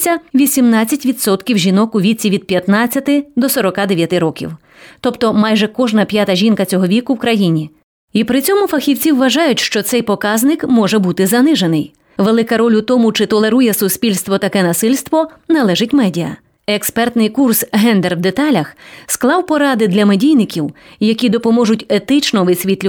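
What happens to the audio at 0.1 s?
Nothing goes wrong at 0.1 s; the speech plays through that moment intact, with no dropout, click, distortion or other fault.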